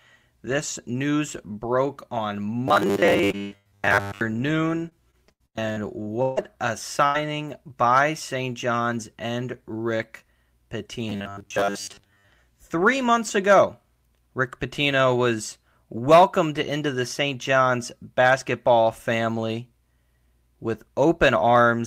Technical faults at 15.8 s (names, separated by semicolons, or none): none